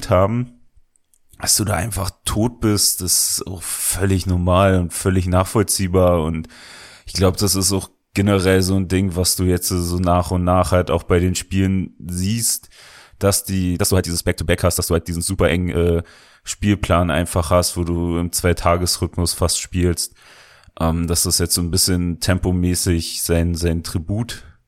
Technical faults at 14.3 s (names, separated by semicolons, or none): time-stretched section